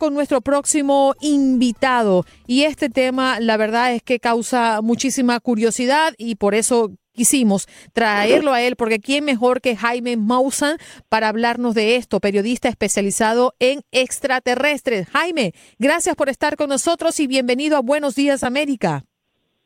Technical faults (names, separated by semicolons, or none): lost LE Audio frames